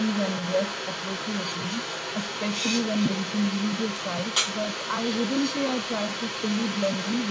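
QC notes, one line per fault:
throughout – echo leak: a second copy of the speech trails the original by about 400 ms, only a little quieter than the original. Unlike room reverb, it is a distinct repeat at a fixed delay rather than a smeared tail. Likely cause: a loudspeaker's echo canceller failed to remove what its microphone picked up.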